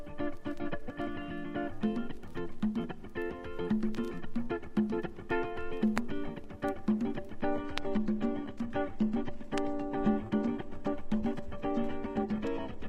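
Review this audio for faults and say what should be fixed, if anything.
At 7.52 s the quality drops abruptly and stays low until the end at 12.89 s. This is an adaptive stream switching to a lower bitrate. The connection slowed, so the player fetched a cheaper rendition. There is no gap. The treble thins, with nothing above 13.2 kHz. Codec artefacts rise. The sound fits a step from 96 kbit/s AAC-LC down to 16 kbit/s HE-AAC. To prevent it, buffer more or cap the lowest rendition.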